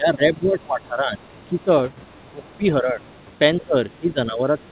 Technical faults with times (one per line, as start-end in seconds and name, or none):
0.00-1.70 speech suppressed in double talk
2.10-2.57 other side's voice leaking through
2.25-3.03 speech suppressed in double talk
3.03-3.24 other side's voice leaking through
3.60-3.96 other side's voice leaking through
3.61-4.72 speech suppressed in double talk
4.59-4.64 other side's voice leaking through